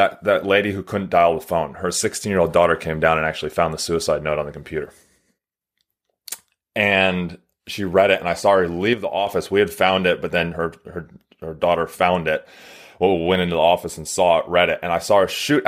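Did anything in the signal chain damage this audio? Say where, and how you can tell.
Yes. The speech drops abruptly by about 6 dB at 5.38–5.61 s and 8.93–9.27 s: one channel drops out, likely at a loose analogue stereo connection. The exact 6 dB step, rather than a gradual gain change, points to a lost channel.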